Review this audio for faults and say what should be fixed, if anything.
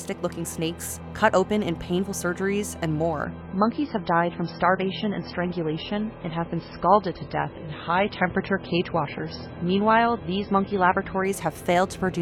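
The stream fell back to a lower-bitrate rendition, most likely because the connection slowed, in an adaptive stream at a lower bitrate between 3.25 and 11.25 s. For those 8 seconds the sound switches abruptly, without any gap, to a dull, band-limited version with nothing above 5.6 kHz and a smeared, warbling texture, which fits a drop from roughly 128 kbit/s MP3 to around 16 kbit/s. Quality snaps back just as suddenly at 11.25 s. To prevent it, give the player a larger buffer and smoother bitrate switching so that brief slowdowns don't force it onto the lowest rendition.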